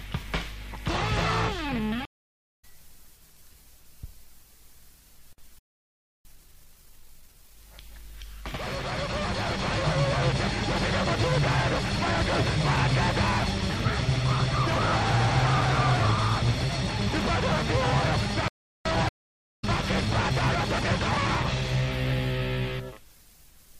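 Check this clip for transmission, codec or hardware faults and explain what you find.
Three kinds of fault are audible: two stream reconnects, two playback stalls, and a time-compressed catch-up after each stall.

Stream reconnect, 2.05 to 2.65 s and 19.09 to 19.65 s: the connection drops for about 0.5 s, a fresh decoder starts, and the audio resumes roughly half a second further on, skipping material.

Playback stall, 5.59 to 6.25 s (0.66 s) and 18.48 to 18.85 s (0.37 s): the sound halts mid-flow, likely because the player's buffer ran dry, then goes on once the player recovers.

Time-compressed catch-up, 6.25 to 7.57 s at 1.5x and 18.85 to 21.77 s at 1.1x: the player trims its backlog by splicing out short pieces, so the audio sounds hurried at normal pitch.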